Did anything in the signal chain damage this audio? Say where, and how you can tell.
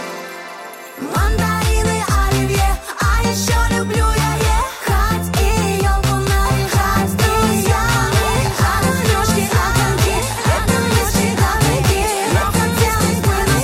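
Yes. A second, slower capture path or an editing step has likely mixed the audio in twice, giving a doubled audio track. From 6.45 s to the end, a full-band copy about 5 dB quieter trails roughly two seconds behind, entering abruptly with no decay or room colour.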